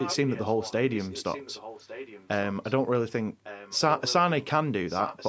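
Speech with echo leak: a delayed copy trailing about 1.16 s behind the direct sound, roughly 10 to 15 dB quieter, at 0 to 0.73 s, 0.9 to 2.74 s, 3.44 to 4.13 s and 4.87 to 5.28 s, likely from a loudspeaker-side echo canceller passing its playback back.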